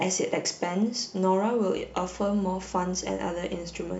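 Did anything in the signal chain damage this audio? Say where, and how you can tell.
Yes. Mains hum enters at the analogue wiring stage, most plausibly through a ground loop or a transformer near the cabling. From 1.76 s to the end of the clip a steady 60 Hz tone sits under the speech, around 20 dB below it. On a spectrogram it shows as an unbroken horizontal line at 60 Hz starting at 1.76 s. In the waveform, the pauses between speech no longer fall to silence but carry a constant low-frequency ripple.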